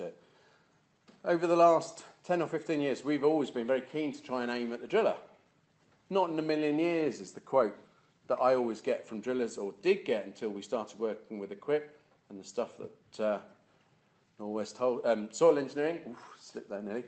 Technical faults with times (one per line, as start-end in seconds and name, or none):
none